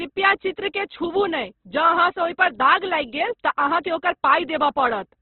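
Throughout the speech, heavy damage from likely Opus compression removes everything above 4.2 kHz, which fits a rate near 12 kbps. The speech turns rough and grainy rather than swirly, because starved bands are filled with noise instead of being left empty as in MP3.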